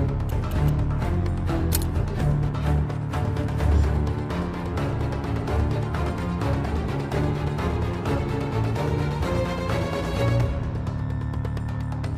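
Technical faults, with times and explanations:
No technical faults detected.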